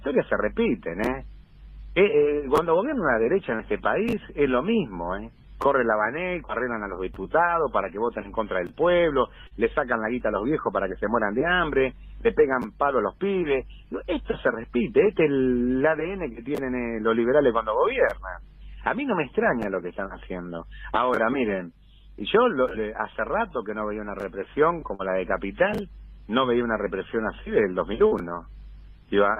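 Short concealed packet loss occurs four times, at 3.55, 9.47, 24.95 and 28.07 s. Each time about 40 ms of audio failed to arrive in time. The receiver covered each gap by extending the preceding sound for roughly 36 to 42 ms, then blended back into the real signal. Each patch is heard as a brief smear or wobble, a short blur lasting under a tenth of a second.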